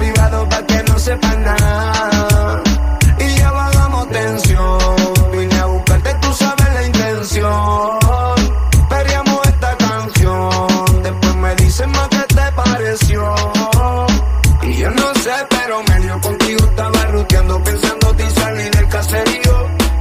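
Timecode bleed throughout: code consistent with 23.976 fps leaks from a neighbouring line as a faint chirping warble flipping between roughly 1 and 2 kHz.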